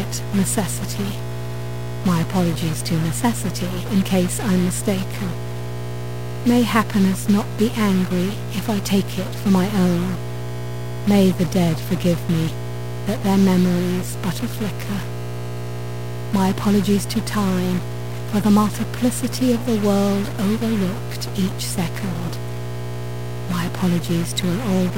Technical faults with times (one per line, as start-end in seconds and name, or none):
0.00-24.97 mains hum
0.00-24.97 stuck bit